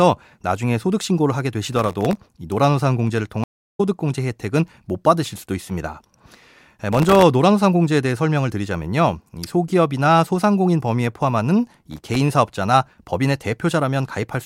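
Processor overload crackle appears from 1.67 to 2.19 s, again from 6.93 to 7.22 s and from 11.91 to 12.16 s. Runs of missed sub-millisecond buffers leave tiny silent gaps, heard as gritty crackle over the speech. At 3.44 to 3.81 s, a stream reconnect cuts the speech for 352 ms, which then resumes roughly a fifth of a second further on.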